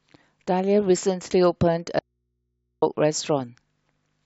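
A speech recording with an audio dropout to a faint residue from 1.99 s to 2.82 s. For about 0.83 s the speech cuts out abruptly mid-flow, and the gap holds only mains hum, roughly 55 dB below the speech level, before the signal returns just as suddenly. The hum shows the path after the break stayed live, so the likely cause is a momentary loss of the source feeding an open input.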